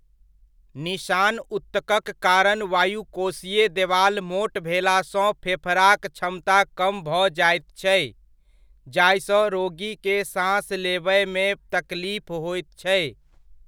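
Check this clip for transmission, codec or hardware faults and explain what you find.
Nothing in the speech points to a transmission, codec or hardware fault.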